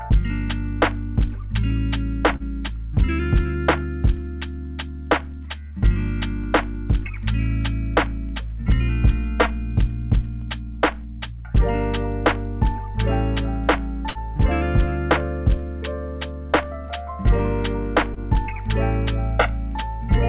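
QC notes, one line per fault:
2.36–2.43 s, short concealed packet loss: about 30 ms of audio arrived too late. The receiver extended the preceding sound for 37 ms and blended back, leaving a brief smear.
14.10–14.18 s, burst of packet loss: 60 ms of audio is gone. The last sound is continued and faded over 52 ms, then playback resumes further on with that stretch skipped.
18.14–18.19 s, short concealed packet loss: 30 ms of audio missing, bridged by 20 ms of continued and blended sound that is heard as a short wobble.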